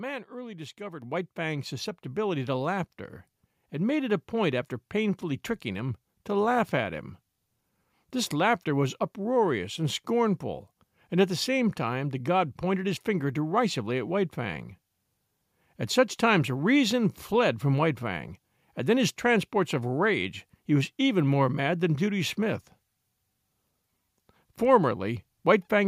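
Microphone volume stepped up at 1.02 s and again at 2.07 s: the call software judged the input too quiet and raised the device gain in single jumps of about 7 dB, then about 3 dB, so voice and background noise suddenly get louder together.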